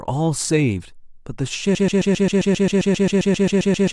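At 1.75 s the speech locks into a broken-record loop: a roughly 0.13 s fragment repeats back to back about 17 times right through to the end. It's likely the player or stream stalled and kept resending its last chunk, so everything after is lost.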